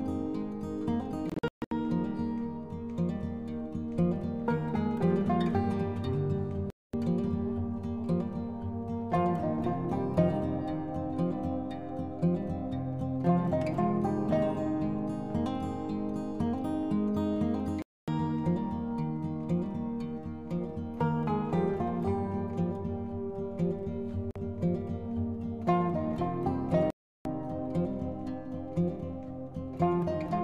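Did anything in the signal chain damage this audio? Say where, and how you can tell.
Yes, there are five hard holes: 1.30 to 1.71 s (broken up, longest gap 0.14 s), then 6.70, 17.82, 24.31 and 26.90 s, lasting 0.05 to 0.35 s. It's likely a Bluetooth dropout: late packets got dropped, output went silent, and the sound resumed further along, as if it had kept playing.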